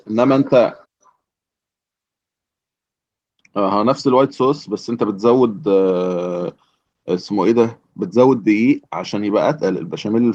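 Nothing goes wrong anywhere in this speech clip, which just carries its light Opus voice compression in the background without anything else turning up.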